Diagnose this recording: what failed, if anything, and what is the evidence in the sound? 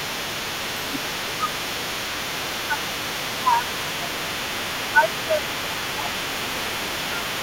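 Other side's voice leaking through, at the call-processing stage: a second voice sits under the speech from 0.0 to 7.4 s, about 10 dB down, likely residual echo the canceller missed.

Speech suppressed in double talk, also call processing: the voice dips roughly 5 to 10 dB at 0.08, 0.69, 1.39, 2.68, 3.29 and 4.93–7.4 s, likely from the canceller attenuating both talkers.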